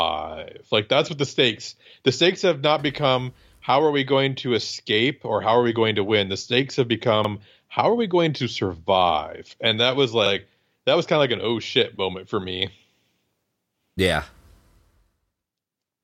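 A short stutter interrupts the speech twice, at 7.25 to 7.29 s and again at 10.26 to 10.31 s. Each time, a 46 ms slice of audio sounds twice back to back, with a hard join where the copy begins. This is a repeated buffer. Fresh audio reached the playback device too late, so it replayed its last block, which fits a 2048-sample buffer. Nothing seems to be skipped, so the stutter only stretches the timing slightly.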